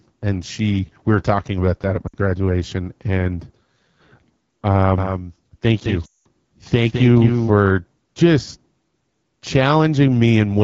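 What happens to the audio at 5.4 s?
At 5.4 s the audio is running through a doubled audio track. A second copy of the signal is likely being captured by a slower path and mixed back in, so from 4.98 s to 7.50 s every syllable is followed about a fifth of a second later by a full-band duplicate around 5 dB quieter. The repeat has no reverb tail or room colour, and it switches on and off abruptly at those edges.

Underneath that, the whole clip passes through the AMR wideband (HD Voice) codec at a low rate. The roughness points to the 8.85 kbit/s mode. The codec models speech up to 6.4 kHz with a pulse-excited vocal tract filter and fills the band above that with shaped noise. At this rate the model is starved, so the speech at 5.4 s sounds plainly raspy and grainy.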